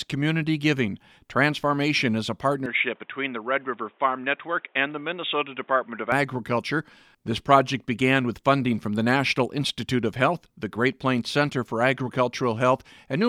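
From 2.66 to 6.12 s the input likely switched to a poorer device. The speech loses everything above 3.8 kHz and turns dull and boxy, with a faint new background noise. There is no gap at either switch and no real change in loudness.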